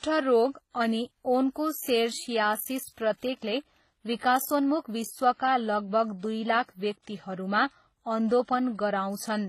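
Transcoding between lossy codecs runs throughout the speech: nothing sounds above 14.9 kHz, and two layers of coding smear are heard together. The likely cause is a low-bitrate WMA encode re-encoded as HE-AAC, the second codec spending its scarce bits on the first's artefacts.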